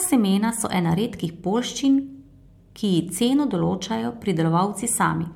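Throughout, the speech shows generation loss: a swirly, hollow tone and smeared consonant attacks, worse than one MP3 encode near 100 kbit/s would produce. The likely cause is about four successive passes, each requantising on a shifted frame grid. Nothing remains above 19.9 kHz.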